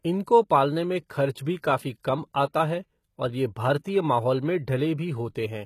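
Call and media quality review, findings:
Gritty, lispy sibilants and metallic treble throughout, nothing above 14.9 kHz. Likely HE-AAC compression near 20 kbps: treble copied up from lower bands, harmonics misaligned.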